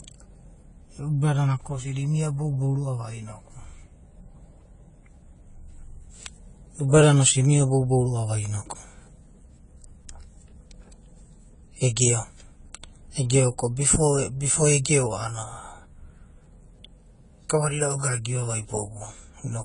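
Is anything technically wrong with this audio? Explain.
Yes. Throughout the speech, there is audible lossy-codec damage, likely AAC compression. Nothing is heard above 10 kHz. Sibilants sound dull and smeared, with a fizzy, warbling edge. Too few bits get spread across the spectrum, which fits a low rate near 24 kbps.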